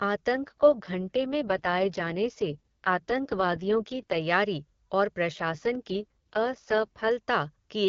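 From 0.32 to 4.21 s and again from 5.31 to 7.10 s, an AMR rate drop makes the speech rough and raspy without narrowing the band or leaving a gap. The sound fits the AMR-WB coder stepping down from 23.85 to 6.6 kbit/s.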